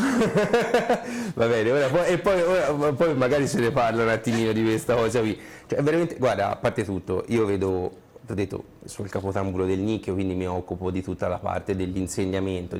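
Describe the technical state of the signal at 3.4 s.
At 3.4 s you're in periodic clock jitter, running 1.92 to 5.36 s. The converter clock wobbles at around 500 Hz, adding sidebands that give highs a rough, metallic edge.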